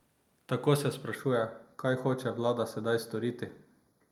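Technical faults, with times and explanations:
1.15 s to the end: channel delay (comb filtering). The speech turns hollow and phasey, losing clarity in the upper range. One channel lags by roughly a fifth of a millisecond, so summing to mono cancels evenly spaced frequencies, the first notch near 3 kHz.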